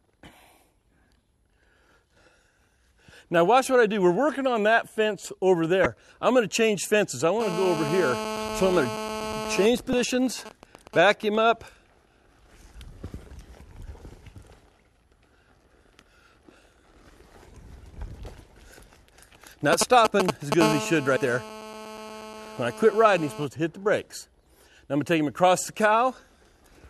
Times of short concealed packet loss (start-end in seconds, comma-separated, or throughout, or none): none